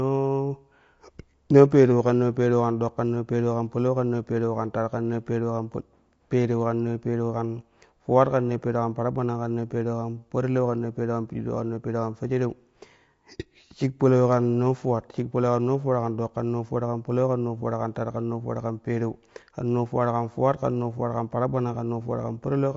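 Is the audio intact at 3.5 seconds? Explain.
No. At 3.5 seconds, as throughout the speech, the sound is rough and grainy, likely from low-delay AAC compression at a bitrate near 32 kbps. Its short frames blur pitch harmonics, so a spectrogram shows smeared harmonics, noise filling the gaps between them, and a thin, patchy top band.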